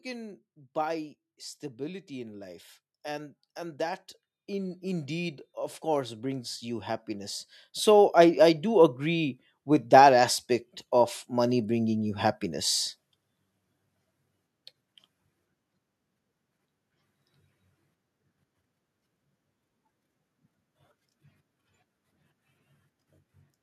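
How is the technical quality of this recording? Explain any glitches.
The recording has one clear fault: automatic gain rising, from 1.76 to 12.83 s. The gain control judged the input too quiet and raised its level gradually, by about 18 dB over those eleven seconds, so the speech and the background noise swell together. On a waveform the envelope widens steadily. On a spectrogram every frequency band brightens at once, including the noise floor between phrases.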